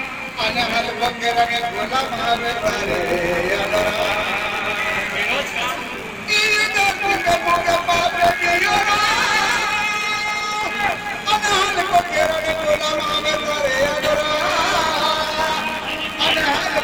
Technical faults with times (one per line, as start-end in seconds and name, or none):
0.00-16.83 buffer tearing